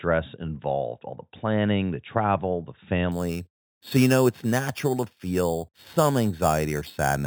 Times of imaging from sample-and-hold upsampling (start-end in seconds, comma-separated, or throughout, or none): 3.12-7.26